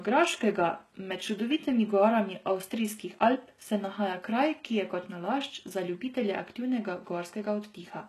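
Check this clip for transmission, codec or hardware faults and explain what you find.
One codec fault runs through the whole speech clip, likely HE-AAC compression at a low bitrate around 16 kbps. Only the lower band is coded; the treble is rebuilt from copied lower bands. Its harmonics misalign, so s sounds turn gritty, metallic or lispy. A spectrogram shows repeated, blocky treble patterns ending abruptly at 12.3 kHz.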